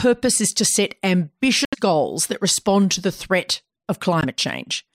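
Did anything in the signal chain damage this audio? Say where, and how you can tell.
Yes. The speech cuts abruptly to silence twice: from 1.65 to 1.75 s, with about 75 ms of dead air, and again from 4.21 to 4.25 s, with a shorter gap of about 18 ms. These hard dropouts at the playback stage are likely a Bluetooth stall. Interference on the wireless link held back packets, the headphones' receive buffer ran empty, and output stopped until the resent packets arrived and playback could resume.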